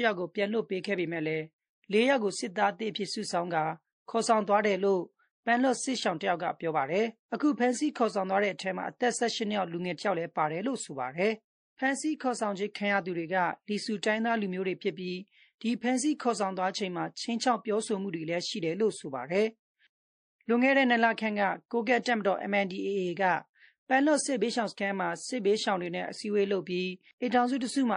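Speech throughout carries plainly audible MP3 compression damage, likely from encoding at a low rate, which fits about 40 kbps: weak detail flickers in and out, giving a watery, swirly texture to the voice. Unlike simple low-pass filtering, the loss shifts from moment to moment. At 22.02 to 22.06 s, pre-echo puts a hiss about 15 dB above the surrounding level over roughly 33 ms, just before a sharp attack, which then sounds smeared. It differs from a click or a reverb tail because the noise arrives before the attack, not after. Its span suggests a transform block of about 52 ms and an encoder that never switched to short blocks.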